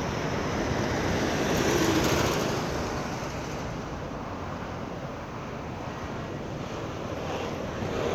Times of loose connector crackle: none

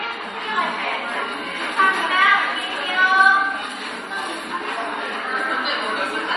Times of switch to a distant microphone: none

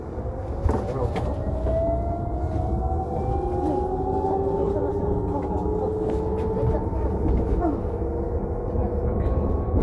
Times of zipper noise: none

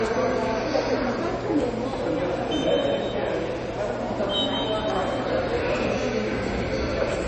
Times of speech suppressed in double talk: none

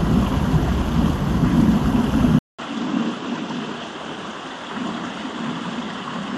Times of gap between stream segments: none

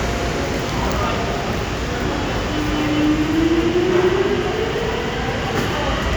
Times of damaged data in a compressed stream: none

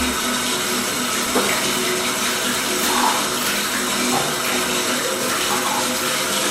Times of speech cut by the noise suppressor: none

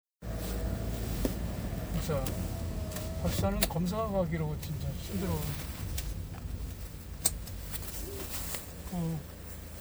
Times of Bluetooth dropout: none

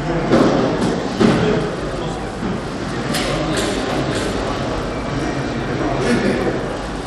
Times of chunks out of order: none

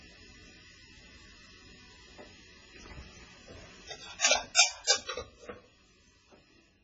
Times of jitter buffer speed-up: none

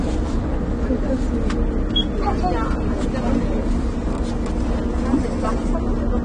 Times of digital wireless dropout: none

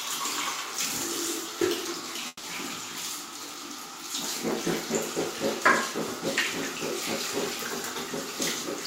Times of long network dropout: 2.27-2.46

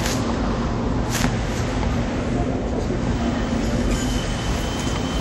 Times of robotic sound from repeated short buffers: none

